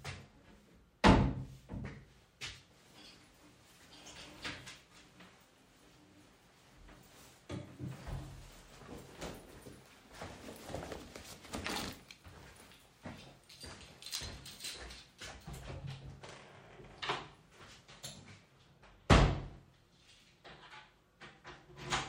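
Listening closely, nothing in these sounds stood out as a technical problem.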